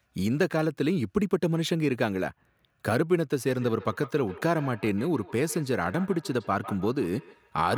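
From 3.39 s to the end of the clip, each stretch of speech is trailed by a faint, thin, ringing copy of itself, coming back roughly every 150 ms and at its loudest about 17 dB below the direct speech. This is feedback echo between two devices: a second device in the same room plays back what this microphone sent, the microphone captures that playback again, and its echo canceller has no reference for sound coming from the other device.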